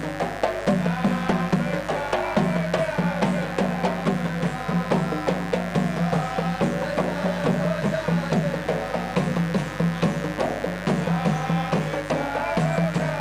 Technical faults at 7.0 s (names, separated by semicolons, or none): mains buzz